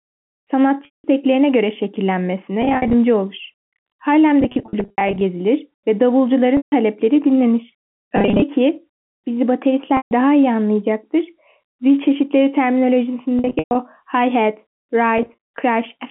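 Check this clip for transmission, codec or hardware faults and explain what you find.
Packet loss with pitch repetition occurs eight times in this speech: at 0.85–1.04, 2.62–2.94, 4.41–5.21, 6.57–6.72, 8.16–8.42, 9.97–10.11, 13.39–13.75 and 15.18–15.58 s. Packets go missing, and the receiver fills each gap by repeating the last pitch period. Short gaps sound like a briefly held, buzzy tone. The longest run, 190 ms near 0.85 s, fades toward silence before speech cross-fades back. The gap pattern fits 10 ms packets. The G.711 telephone band, 150 Hz to 3.4 kHz, is audible underneath.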